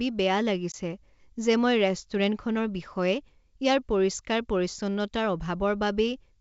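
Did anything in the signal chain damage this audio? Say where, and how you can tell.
Yes. Packet loss on the ADPCM call, at the network stage, shows as a hard-edged gap of about 20 ms around 0.72 to 0.75 s, roughly one packet. The missing audio was filled with silence, leaving the decoder's adaptive predictor and step size out of step with the sender's.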